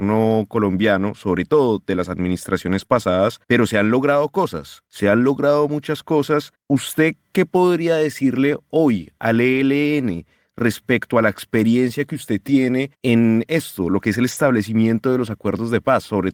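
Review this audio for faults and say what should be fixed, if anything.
Lost packets rebuilt from error correction at 2.78–2.84 s, 2.91–2.97 s (just before "pero se han logrado"), 9.53–9.59 s (after "podría decirle hoy al") and 14.31–14.49 s. Low-bitrate redundant copies fill the gaps, so these stretches sound rougher and noisier, for about 40 ms each and 100 ms at 14.3 s.

Short concealed packet loss at 2.86–2.91 s, just before "pero se han logrado". About 20 ms never arrived, and the decoder extrapolated the preceding sound, leaving a brief smear.

Reducing packet loss on the network path, or adding jitter-buffer headroom so late packets still arrive in time, would prevent both.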